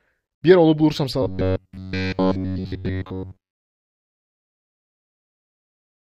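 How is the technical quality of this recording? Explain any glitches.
The recording has one clear fault. From 1.23 to 4.98 s, the speech takes on a robotic sound from repeated short buffers. It becomes a rigid, metallic buzz near 94 Hz. The likely cause is late audio, so a chunk of about 10.7 ms repeats and covers most of the real signal.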